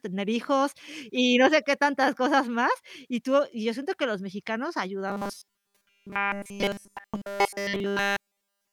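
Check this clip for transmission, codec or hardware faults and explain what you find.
One fault: robotic sound from repeated short buffers, from 5.08 s to 8.72 s. Audio likely arrived too seldom, so a roughly 5 ms buffer looped almost continuously, forcing a rigid metallic 200 Hz buzz over the speech.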